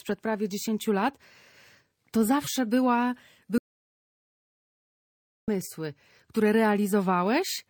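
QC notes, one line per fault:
2.42–2.47 s, corrupt frame decoded: a brief, harsh chirp-like burst cuts across the sound, peaking at around -20 dBFS and lasting a little over 50 ms. Its length suggests two adjacent compressed frames whose bits were damaged yet still decoded. Misread codes and wrong gains placed energy at frequencies where none belonged, so the error is heard as a foreign blip, ending as soon as clean frames resume.
3.58–5.48 s, audio dropout to silence: the sound stops abruptly mid-flow and returns just as suddenly after about 1.9 s of silence, with no room tone or noise floor underneath. This is likely a loss of the input signal, such as a disconnect, failed link or stray mute, while recording or encoding carried on writing silence. Whatever occurred during that stretch is missing entirely, not merely quiet.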